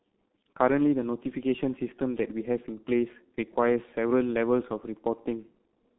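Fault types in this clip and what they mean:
G.723.1 codec: The speech has passed through a very low-rate telephony codec running at 6.3 kbit/s, which models the voice in 30 ms frames and updates that model slowly. Nothing reaches above 3.8 kHz, and the line band of 200 Hz to 3.5 kHz thins the low end too. The damage is heavy: a muffled, hoarse quality with smeared consonants. Plain band-limiting would dull the sound without this rough, hoarse voicing.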